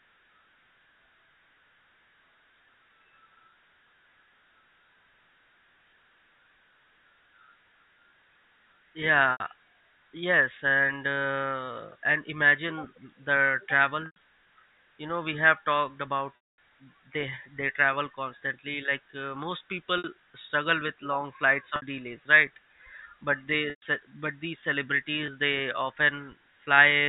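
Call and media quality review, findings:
Packet loss with pitch repetition at 9.32, 14.06, 16.36, 19.98, 21.76, 23.70 and 25.26 s. Gaps of 20 to 220 ms, bridged by the receiver's concealment looping the last pitch period, heard as brief held, buzzy tones. Longest, 220 ms between "talked about" and "they they travel", fades toward silence before a short cross-fade back. Network-side loss, not the G.711 A-law path, which carries the narrowband telephone band cleanly.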